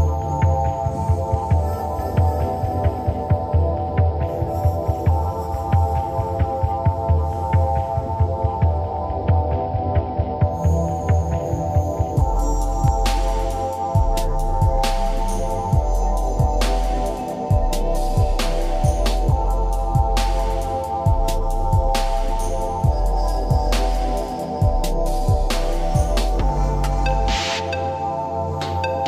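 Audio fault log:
12.88–12.90 s, loud pop: a single sharp pop, peaking about 5 dB above the sound, which carries on underneath; likely a sudden voltage pulse from a plug, switch or static.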